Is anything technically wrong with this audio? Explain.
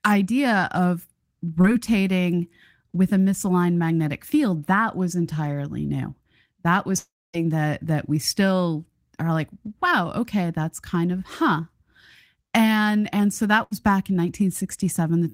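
Yes, there are three faults, all caused by audio failing to arrive in time.

From 1.61 to 1.66 s, just after "idea of", there is a short concealed packet loss. About 20 ms never reached the decoder, and the receiver continued the preceding sound to cover the gap. It is heard as a brief smear, and a spectrogram shows a thin, slightly blurred vertical band.

From 6.98 to 7.35 s, just before "that that we still", the sound is replaced by a fading buzz or hiss and then roughly 250 ms of silence. About 360 ms is gone, most likely from a long network dropout. A waveform shows a decaying tail followed by a flat gap.

From 13.63 to 13.73 s, between "and and so" and "back in", a burst of packet loss removes about 80 ms. The last sound is held and fades out, which a spectrogram shows as smeared, stretched energy.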